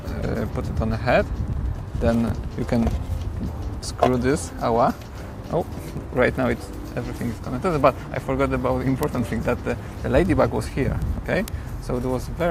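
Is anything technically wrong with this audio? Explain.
Yes. Word clock ticks run through nearly the whole clip, from about 0.15 s to 12.4 s, recurring roughly every 0.15 s, around seventy in all. A digital link is being read by a receiver running on its own clock rather than locked to the sender. The two clocks differ by something on the order of 150 parts per million, so they slip a full sample at regular intervals, and each slip drops or repeats a single sample. The result is a steady train of sharp, uneven clicks riding over the sound.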